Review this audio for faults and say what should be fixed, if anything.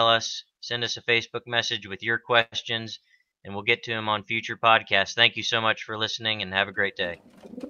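At 2.41 s the sound stalls for about 0.14 s, to 2.55 s: the last moment is stretched into a fading buzz or hiss for roughly 105 ms, then about 30 ms of silence, before the audio resumes exactly where it stopped, with nothing lost. This call audio freeze is likely from packets held up in transit until the jitter buffer emptied. The receiver filled the wait, so everything after plays about 105 ms later. Preventing it means enlarging the jitter buffer and reducing network congestion or jitter on the path.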